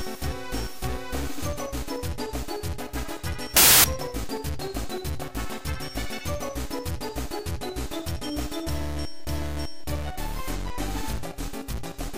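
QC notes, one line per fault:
3.57–3.84 s, samples built from the wrong bytes: for just over a quarter of a second the audio turns into a blast of loud, harsh broadband noise. What's happening is the reader is stitching each sample's bytes together wrongly, out of step by a byte or in swapped order, so the jittery low bits end up as the big part of every value. The result is loud, harsh noise, cutting in and out hard at both edges.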